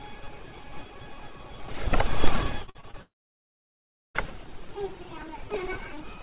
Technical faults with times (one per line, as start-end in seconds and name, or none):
2.62-2.95 repeated packet loss (robotic sound)
3.01-4.17 long network dropout